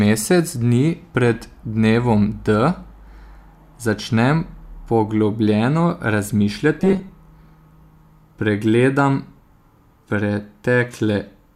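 From 6.80 to 7.10 s the speech turns into a rigid, metallic buzz at 188 Hz: robotic sound, likely from repeated short buffers of about 5.3 ms filling in for roughly half the audio. Unlike a stutter, the words roughly continue.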